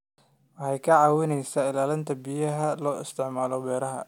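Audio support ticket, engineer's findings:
Engineer's findings: no fault found in the speech audio for this ticket.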